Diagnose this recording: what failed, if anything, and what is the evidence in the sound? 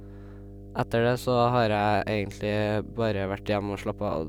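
The analogue wiring stage failed: a ground loop or a nearby power transformer is coupling the mains supply into the signal path before conversion. The result is mains hum, a steady low tone at 50 Hz that runs through the whole speech recording from start to finish without varying. It sits around 15 dB below the speech, loud enough to be clearly heard under it and to fill the pauses with a constant drone.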